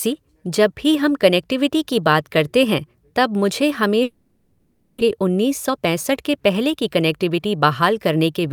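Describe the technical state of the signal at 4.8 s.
At 4.8 s the signal sits inside what is likely a long network dropout, running from 4.03 to 5.02 s: incoming audio stalled, so the receiver concealed the gap with a fading buzz or hiss, about 0.6 s of sound was lost, and playback resumed about 0.4 s later.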